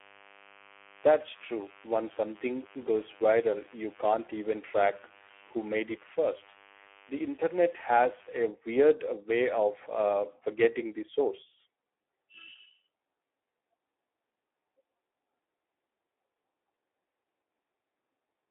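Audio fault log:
throughout: Speex codec. The speech sounds hoarse and grainy, the classic starved-CELP sound where the excitation just doesn't get enough bits. The damage here is heavy, which fits a low setting around 8 kbps. On top of that it's squeezed into a phone-style 300 Hz to 3.4 kHz band, with nothing at all above 3.8 kHz, so there's no sibilant air and the whole thing sounds boxed-in and thin.
0.00–8.41 s: mains buzz. A steady, raspy 50 Hz buzz sits under everything for the first eight seconds, roughly 25 dB below the speech. It sounds spiky rather than like a smooth hum because sharp switching pulses from something like a dimmer or rectifier, or a missing shield, land twice per mains cycle and throw harmonics up into the kilohertz range. It drops out just before "weird way of uh".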